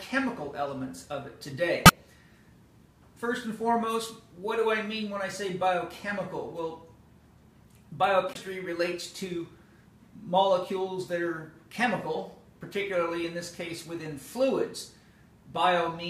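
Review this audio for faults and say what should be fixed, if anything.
Two short bursts of damaged data in the compressed stream occur at 1.85 to 1.90 s and 8.32 to 8.37 s, each about 40 ms long. In both, the decoder hits corrupted frames, misreads them and loses sync until it finds the next valid frame header. The result is a brief chirp, squawk, click or short hole. On a spectrogram each burst shows as a narrow vertical disruption. On the waveform the signal breaks abruptly at both edges. To prevent this, protect the stream in transit and storage with checksums or error-checked transport, and retransmit or re-encode from an intact source.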